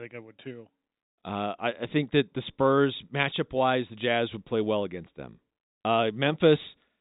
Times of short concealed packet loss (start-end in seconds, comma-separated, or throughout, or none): none